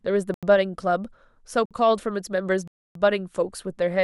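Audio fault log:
0.34–0.43 s, 1.66–1.71 s and 2.68–2.95 s: block of digital silence. The speech cuts to silence for 85 ms, 51 ms and 277 ms, likely because the output buffer wasn't filled in time. The first gap fits a 4096-sample buffer. There is no fade, which distinguishes these from a faded dropout or a concealed gap.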